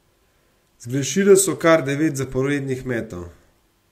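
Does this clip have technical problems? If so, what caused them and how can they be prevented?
No, nothing stood out on listening to this speech clip.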